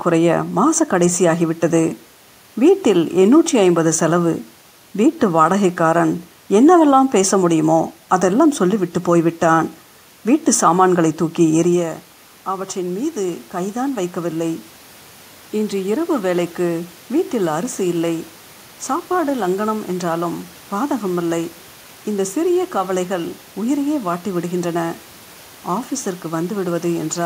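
From 11.75 to 14.7 s, automatic gain rising follows the talker moving back near 11.5 s. Input fell about 11 dB. Gain climbs about 4 dB, lifting voice and room noise together.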